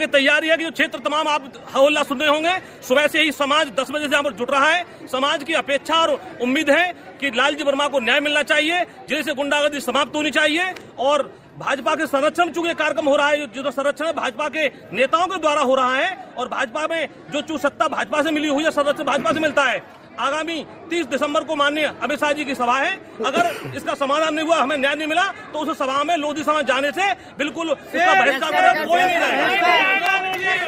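No technical faults can be heard anywhere in the audio; the signal stays steady and continuous throughout.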